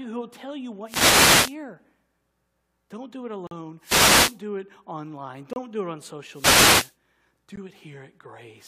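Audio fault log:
0.84–1.57 s, 3.79–4.41 s, 6.31–6.96 s (after "do it on"): wireless microphone noise hit. A radio fade lets receiver hiss swell into a static swish over the voice. The sound is masked by noise, not dropped to silence.
3.47–3.51 s (after "do it"), 5.53–5.56 s (between "do it online" and "do it on"), 7.56 s: gap between stream segments. Hard-edged silent holes of about 41, 28 and 16 ms fall roughly every 2 s, consistent with a mismatch between segment timestamps. They contain no hiss, and nothing is lost around them.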